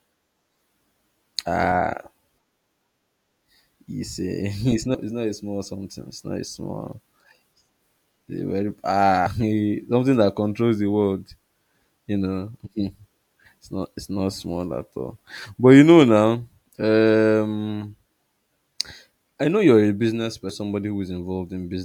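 Damaged data in a compressed stream shows up three times in this speech, at 4.94–4.98 s, 9.26–9.30 s and 20.50–20.53 s. Each is a brief glitch lasting about 30 ms, where corrupted frames are misread and the decoder loses sync before finding the next valid frame header.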